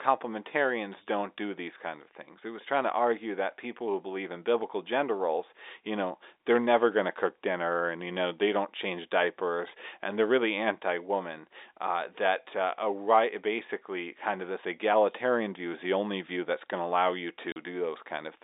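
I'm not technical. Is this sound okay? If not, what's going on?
No. Right after "going to allow you," at 17.52 s, there's packet loss filled with silence: a 40 ms hole with hard edges, likely two dropped 20 ms network chunks.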